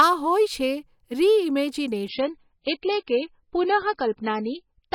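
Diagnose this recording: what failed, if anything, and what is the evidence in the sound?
An adaptive stream dropped to a lower bitrate from 2.08 s to the end of this speech, a network-stage fault. The treble abruptly vanishes above 5.5 kHz with no gap, consistent with the player switching from roughly 128 kbit/s MP3 to a 16 kbit/s rendition when throughput fell.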